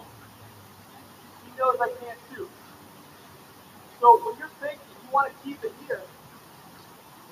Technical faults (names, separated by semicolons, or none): noise suppressor applied to music or sounds